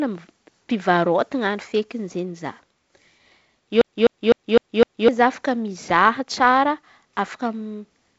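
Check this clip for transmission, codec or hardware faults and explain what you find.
One fault turns up, a CD stuck on one turn, and it sits in band-limited speech that stops near 7.8 kHz, as G.722 wideband telephone coding does. From 3.81 to 5.08 s, a scratch keeps throwing the laser back, so the same 0.25 s segment replays five times with a brief mute at each jump. The waveform shows identical repeating blocks separated by small gaps, and the spectrogram shows matching vertical stripes.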